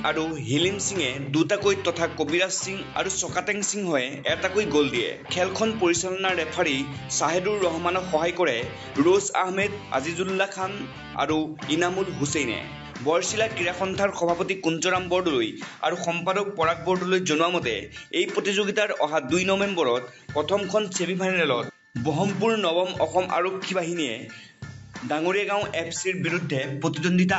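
No faults are audible; the audio carries the expected 8 kHz ceiling from the call microphone processing and WebRTC call path.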